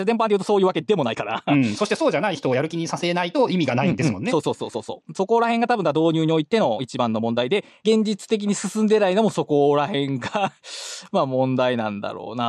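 A time-stretched section runs from 0 to 7.92 s, sped up 1.45 times at unchanged pitch, likely by dropping short pieces, so the speech sounds rushed.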